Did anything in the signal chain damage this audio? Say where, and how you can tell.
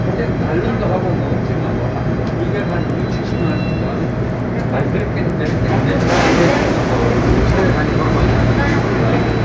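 Yes. From 2.4 s to the end, the resampler restarts on every block: 10 Hz ticks only while sound plays, no gaps. This fits 100 ms blocks converted separately from 44.1 to 16 kHz.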